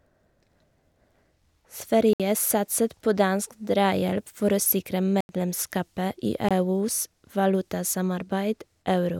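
At 2.13 to 2.20 s, 5.21 to 5.29 s and 6.49 to 6.51 s the speech drops into a block of digital silence lasting 64, 85 and 21 ms. The output buffer likely went unfilled, so the samples were zeros. The 85 ms and 21 ms holes fit 4096- and 1024-sample buffers. Each gap starts and ends abruptly. A fade-out dropout would have softened edges, and concealment would repeat or smear sound instead of leaving true silence.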